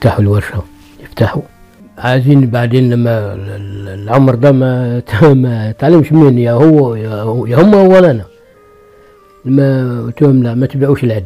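Hard clipping runs throughout: the signal is driven about 5 dB past full scale, so roughly 3 percent of samples flatten, adding crackly harmonic grit on peaks.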